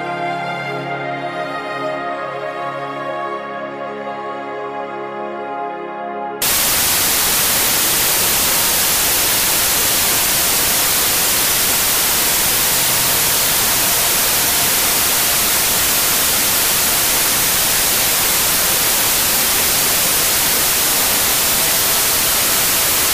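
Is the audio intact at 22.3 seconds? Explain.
No. From 6.42 s to the end, the data are affected by a wrong sample width. Packed 24-bit samples are read as 32-bit integers, so most values combine bytes from neighbouring samples. The result is loud noise with the original buried inside, playing 1.33 times too fast and high in pitch.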